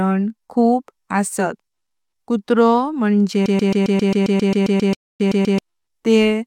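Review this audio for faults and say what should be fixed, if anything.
From 3.46 to 5.59 s, a tiny 134 ms fragment of speech repeats back to back fourteen times, producing a stuttering broken-record loop. The likely cause is a stalled player or encoder resending the last fragment it held, so the speech meant for that stretch is lost. To prevent it, the decoder should conceal or mute a gap when input stops rather than recycle its last buffer.

From 4.95 to 5.20 s, the audio drops to silence for 0.25 s and then resumes exactly where it stopped. This is a rebuffering stall: playback ran out of downloaded data and waited for more, adding time without losing any sound. A larger playback buffer or steadier delivery would prevent it.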